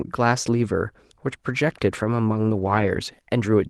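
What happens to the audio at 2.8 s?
Around 2.8 s the speech falls inside a lost packet rebuilt from error correction, spanning 2.57 to 2.87 s. Each missing Opus packet was replaced by the lower-bitrate copy carried in the next packet, giving about 160 ms of rebuilt audio that sounds rougher and noisier but has no gap. The waveform stays continuous, while a spectrogram shows grainier, noisier texture and less distinct harmonics across that span.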